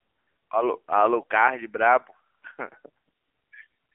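From start to finish, the speech carries the sound of the AMR narrowband mobile codec. The band is squeezed to a telephone line, roughly 250 Hz to 3.4 kHz. Nothing above 3.4 kHz survives, so sibilants lose their edge. The codec rebuilds the voice from a vocal-tract model fed by sparse pulses. At this low rate the damage is plainly audible, a buzzy, synthetic quality that fits a bitrate near 7.4 kbps.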